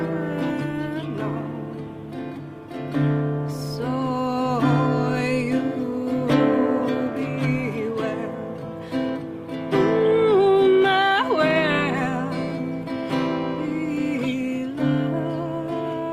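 No technical faults can be heard anywhere in the recording.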